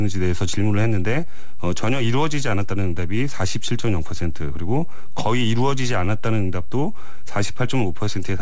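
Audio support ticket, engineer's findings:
DC offset throughout: constant shift of the waveform off zero, inaudible but eating headroom, steady energy at the bottom of the spectrum. Probable capture-side bias.

Clock drift between sender and receiver throughout: sender clock running about 3% slow. Jitter buffer keeps draining, so the receiver stretches playback to compensate.

Repeated timing corrections, 0.16 to 7.48 s: receiver repeatedly inserting short repeated pieces, uneven spacing, same direction. Playback runs at 98% speed, adding roughly 200 ms overall. Audio passes through a G.722 call path with nothing above 8 kHz.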